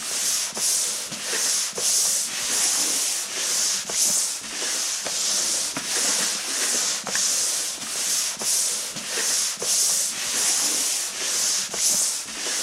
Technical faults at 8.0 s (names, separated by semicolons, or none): none